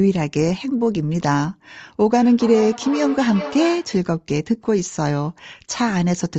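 From 2.17 to 4.02 s, thin, ringing repeats return roughly every 0.4 s, about 11 dB below the speech. This is feedback echo between two devices, one replaying the other's microphone.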